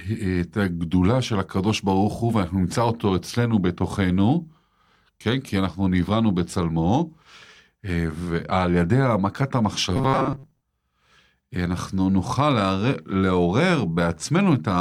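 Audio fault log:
9.96 to 10.61 s, robotic sound from repeated short buffers: the speech becomes a rigid metallic buzz fixed at 134 Hz, likely from roughly half the audio being replaced by repeats of a 7.5 ms buffer. Unlike a pitch shift, the buzz follows the original only roughly.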